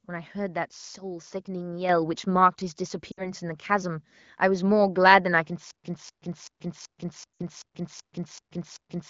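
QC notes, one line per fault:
1.89 s, microphone volume stepped up: the speech and the background noise floor rise together by about 6 dB in a single step. The call software's automatic level control judged the microphone input too quiet and raised the device input volume in one move. Because the change is applied before any processing, the voice and the room sound jump at the same instant, with no gradual fade.
3.11 to 3.32 s and 7.37 to 7.42 s, lost AMR speech frames: each event has a gap of about 60 ms, which fits three consecutive 20 ms frames failing their checks. The decoder reuses the last good pitch and vocal tract parameters while lowering the gain, so the sound briefly smears and then fades out. With the wideband codec, the fade is quick. Afterwards the voice returns weak or rough for a moment before it settles. Outside these gaps, the sound has the clean band-limited character of a higher-rate AMR-WB mode.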